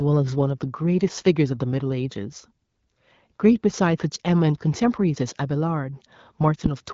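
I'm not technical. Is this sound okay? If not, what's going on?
Yes, this sound is okay, and there's nothing going wrong with it.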